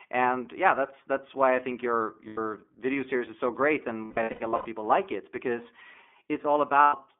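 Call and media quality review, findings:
iLBC codec, whole clip. Narrowband speech, band roughly 250 Hz to 3.5 kHz. Plainly rough, synthetic texture. Each frame's excitation coded independently. Character fits the 13.33 kbps mode with 30 ms frames.

Lost iLBC frames at 2.27–2.38 s, 4.04–4.66 s and 6.83–6.96 s. Held, buzzy vowel-like fill. Decoder repeats the last pitch cycle with noise. The middle event is scattered dropouts, longest about a tenth of a second. Clean recovery after each gap.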